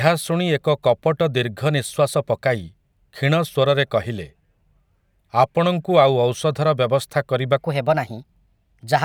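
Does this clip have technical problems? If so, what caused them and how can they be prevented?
Yes. From 7.58 s to the end at 9.05 s, the speech turns hurried and high: a section at the wrong speed, running 1.15 times fast and about two semitones sharp. This likely came from playing that segment against a mismatched clock. Keeping sample rates consistent through editing and playback prevents it.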